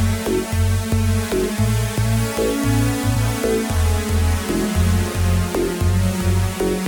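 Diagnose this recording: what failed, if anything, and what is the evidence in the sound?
No fault detected anywhere.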